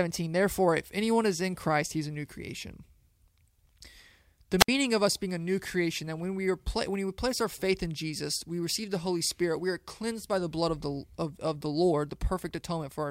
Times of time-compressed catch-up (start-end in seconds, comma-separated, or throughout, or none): none